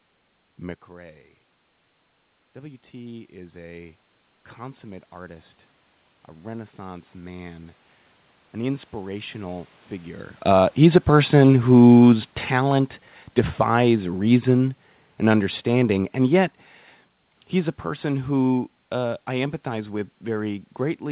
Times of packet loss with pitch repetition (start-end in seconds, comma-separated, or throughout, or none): none